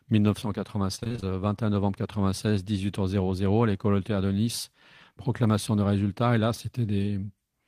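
From 0.95 to 1.24 s the speech breaks up with repeated packet loss, giving it a robotic sound. Seven short dropouts, the longest 27 ms, get patched by stretching the preceding sound, so about half that stretch is filler and comes out choppy.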